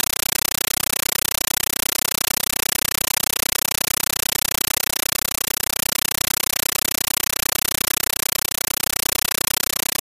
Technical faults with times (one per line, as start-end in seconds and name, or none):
0.00-10.04 compressed stream played as audio